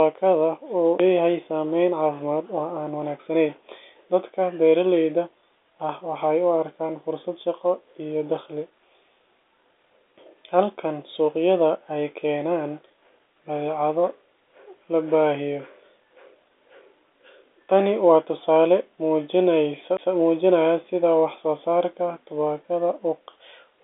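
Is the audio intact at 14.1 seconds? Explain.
Yes, at 14.1 s the audio is intact, with no dropout, click or distortion, only the narrow, telephone-band sound of the G.711 line coding, which passes nothing above about 3.8 kHz.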